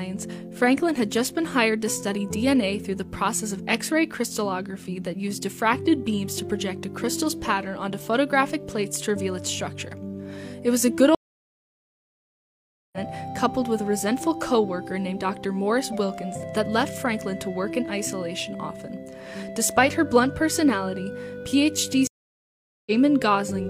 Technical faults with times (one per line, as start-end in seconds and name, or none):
11.15-12.98 stream reconnect
22.07-22.92 stream reconnect